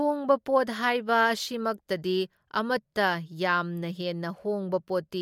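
Speech recording with no audible technical faults anywhere in the clip.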